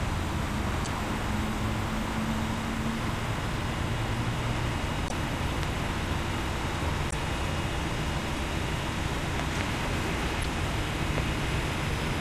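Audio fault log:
0.83–0.87 s, 5.06–5.11 s, 7.08–7.14 s and 10.41–10.45 s: damaged data in a compressed stream. Corrupted frames make the decoder misread them and resync, giving short chirps and blips of about 45 to 55 ms. A spectrogram shows brief smeared broadband or blocky patches, and the waveform shows small discontinuities.
5.63–5.65 s, 9.40–9.63 s (two pops) and 11.18–11.20 s: loud pop. These are sharp pops sitting about 15 dB above the sound, with the last reaching about 20 dB, while the audio continues underneath. They were likely caused by voltage steps from a switch, plug or static. The waveform shows tall narrow spikes, and the spectrogram shows thin full-height vertical lines.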